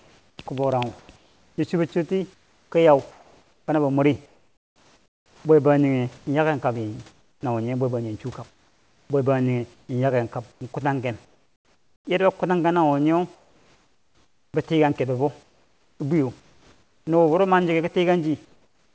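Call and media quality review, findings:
Comfort noise in place of the background: 0.0–5.45 s (ending just before "bwe bangjinghe yaken"), 7.11–7.43 s, 8.49–12.07 s (ending before "yarda bou kutanghe nawo"), 13.35–14.54 s (after "bou kutanghe nawo nyee"), 15.43–17.07 s, 18.45–18.95 s. Likely sender DTX in pauses, with the receiver synthesising noise. Real room background replaced by flat, featureless hiss, about 7–8 dB quieter in the 7.11, 13.35 and 18.45 s pauses, capped at 8 kHz by the G.722 path.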